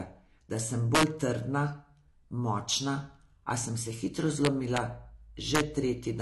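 From the start the whole clip sounds dull and plainly swirly, with nothing above 12.1 kHz, likely AAC compression at a low bitrate, around 32 kbps. Then integer overflow hits at 0.95 to 1.03 s, 4.45 to 4.77 s and 5.55 to 5.60 s: peaks pushed about 2 to 4 dB over the limit wrap to the opposite sign, giving harsh cracks.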